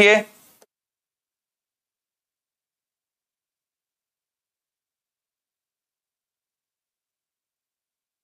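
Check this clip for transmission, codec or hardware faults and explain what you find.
No transmission or hardware faults can be heard here.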